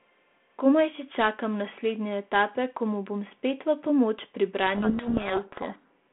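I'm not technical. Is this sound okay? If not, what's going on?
No. From 4.76 to 5.90 s the speech is buried under harsh, grinding distortion. This is a codec payload misread: the phone system sends its compressed audio with the bits in one order, but the receiving end reads them in the reverse order, so the decoded sound comes out mangled.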